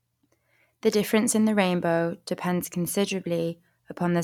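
No technical faults can be heard anywhere in this speech recording. Nothing along the way drops out, repeats, clicks or changes in level or pitch.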